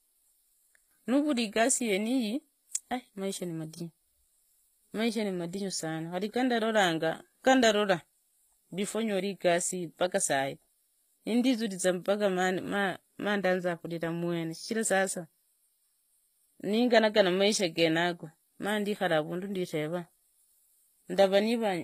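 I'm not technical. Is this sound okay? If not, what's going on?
No, not quite. All the way through, the speech has a plainly artificial, fizzy top end: the s sounds come out gritty or a bit lispy, and nothing reaches above about 15.5 kHz. That's likely HE-AAC compression, a format that saves space by storing only the lower part of the sound properly and then faking the treble by copying lower bands upward. The faked part doesn't quite line up with the real voice, which is what you're hearing.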